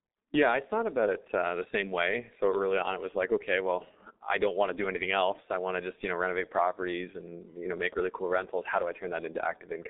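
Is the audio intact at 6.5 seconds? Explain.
No. At 6.5 seconds, as across the whole recording, the speech carries G.723.1 codec damage, and it is heavy. Nothing above about 3.8 kHz survives, and the passband sits roughly between 250 Hz and 3.7 kHz, so the sound is muffled and thin. The coder packs speech into long frames and refreshes its vocal-tract model slowly, which fits a rate near 6 kbit/s. That leaves the voice hoarse and the consonants smeared.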